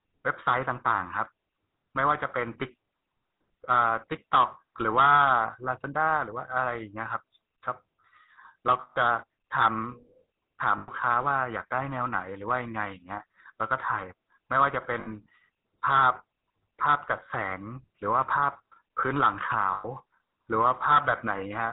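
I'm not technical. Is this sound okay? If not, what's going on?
No. The whole recording went through the old GSM full-rate codec, the phone compression that cuts high tones and makes speech sound buzzy and gravelly. Lost GSM frames also occur at 8.8, 10.78, 15.0 and 19.74 seconds. Each time, the sound briefly freezes into a rough, metallic ring for between about 0.06 and 0.16 seconds.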